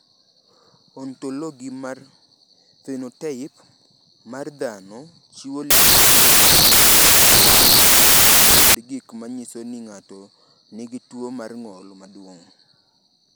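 From 5.71 to 8.75 s, the reader assembled samples built from the wrong bytes. It combined each sample's bytes in the wrong order or alignment, so the rapidly changing low bits became the dominant part of every value. The audio turns into loud, harsh broadband noise for those three seconds.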